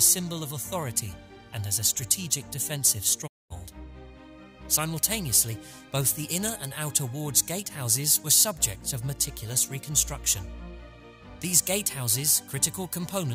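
A digital broadcast dropout hits at 3.26 s: the audio fades out over about 20 ms and stays silent until 3.52 s, when it resumes further along in the programme. The receiver stopped getting frames it could decode, through signal loss or failed checksums, and muted rather than play corrupt data. About 224 ms of material is missing, which fits roughly seven lost frames, and it is gone for good rather than delayed.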